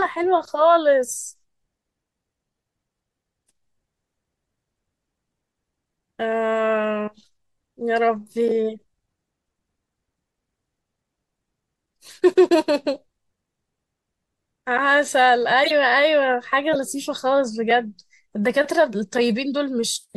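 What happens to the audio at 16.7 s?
A corrupt frame was decoded from 16.73 to 16.76 s: flipped bits in a single compressed frame were played anyway, so misread gains and codes put energy at the wrong frequencies. The result is a brief, fairly loud chirp, squeak, blip or burst of noise cutting across the speech.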